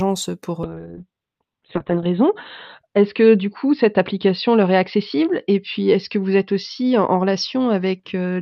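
At 0.64 s a call bitrate drop begins: the encoder's budget falls from 64 to 6 kbps, bandwidth narrowing from 20 kHz to 4 kHz. Speech turns muffled and watery, bottoming out for 1.42 s. Unlike a fixed filter, coarse coding smears consonants too.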